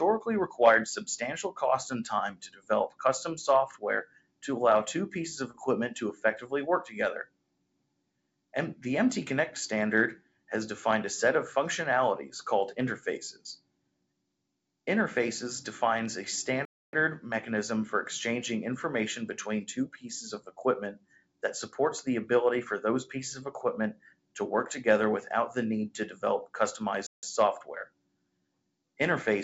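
From the start, a noise suppressor tuned for speech is running on music or sounds rather than speech. It treats sustained tones, ambience and decaying tails as noise and pulls them down, while attacks pass more freely. Across the clip the level swings by around 10 dB, so held material pumps and thins. The audio also carries no content above 8 kHz, which fits a wideband call codec such as G.722 at 64 kbps.

On top of that steady behaviour, the suppressor cuts individual sounds harder. The first is at 2.33 to 2.7 s, where a sound sinks by about 17 dB. Further cuts, each reaching about 21 dB at their deepest, follow at 4.04 to 4.43 s, 7.25 to 8.54 s, 10.17 to 10.5 s, 13.33 to 14.7 s, 20.95 to 21.43 s, 23.93 to 24.36 s and 27.86 to 28.97 s. The longer cuts, of roughly a second, audibly swallow held sound and shorten its decay.

At 5.51 to 5.56 s there is a short concealed packet loss. About 30 ms of audio never arrived, and the receiver synthesised 25 ms of replacement by extending the preceding sound before crossfading back into the real signal. 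It comes across as a brief smear or wobble rather than a gap.

Two playback stalls interrupt the flow. The output goes silent for 0.28 s at 16.65 s and for 0.16 s at 27.07 s, then resumes. The likely cause is the player running short of buffered data, or its audio thread being blocked, until it caught up.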